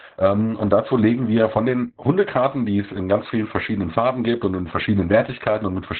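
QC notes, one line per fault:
Throughout: Opus voice compression. The speech sounds muffled, hoarse and slightly robotic. Nothing is heard above 4.3 kHz. That narrow band and the coarse excitation coding point to Opus in its SILK speech mode at a very low bitrate, around 8 kbps.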